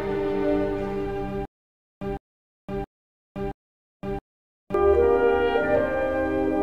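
From 1.45 to 4.74 s, stutter with silent gaps: a 157 ms burst repeats four times between 516 ms digital silences, likely a stalled stream; plain dropouts don't repeat.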